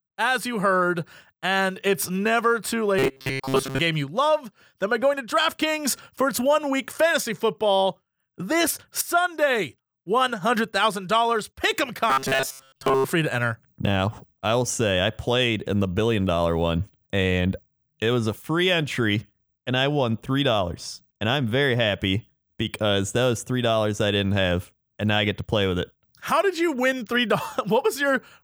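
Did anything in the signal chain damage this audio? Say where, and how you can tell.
Yes: a rigid, metallic buzz near 134 Hz at 2.99–3.79 s and 12.10–13.04 s is robotic sound from repeated short buffers, likely a buffer underrun looping roughly 7.5 ms chunks.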